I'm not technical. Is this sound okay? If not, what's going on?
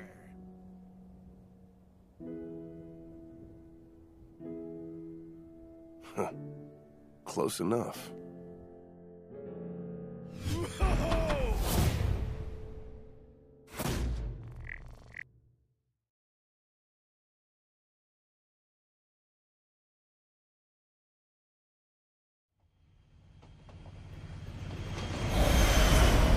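Yes, nothing in this recording points to a technical problem with how the sound was captured or delivered.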